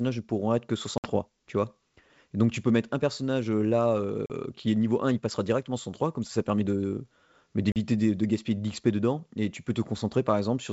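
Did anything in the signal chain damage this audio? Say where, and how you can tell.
Yes. Packet loss on an ADPCM call, a network-stage fault, cuts hard-edged holes at 0.98–1.08 s after "ne pourront être que", at 4.26–4.31 s after "un personnage euh là", and at 7.72–7.77 s before "de de gaspiller". The gaps span 60, 40 and 40 ms, each consistent with two or three packets. The silence replacing them throws the decoder's adaptive predictor and step size out of step with the sender's. Speech therefore resumes slightly distorted before settling, over the G.722 wideband link at 64 kbit/s.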